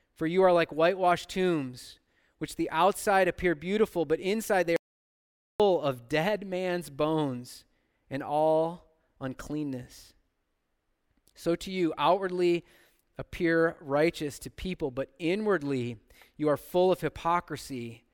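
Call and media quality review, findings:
Audio dropout to silence, 4.76–5.60 s, about 0.83 s lost after "beautiful but inside they", resuming mid-flow at "of dead man's bones". Gap is silent with no room tone, unlike a noise gate or concealment fill. Likely input device or link loss, with the encoder writing silence.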